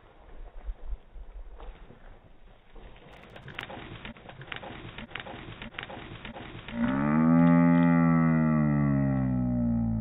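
A burst of processor overload crackle runs from 3.12 s to 3.61 s. For about half a second the sound turns gritty and torn. The processor could not finish its audio buffers in time. Missed deadlines came close together, perhaps around fifteen of them. Each miss repeated a scrap of old audio with hard edges. The tiny repeats fit buffers of around 10 ms. Together they form a rough crackle laid over the sound. It stops once the load eases.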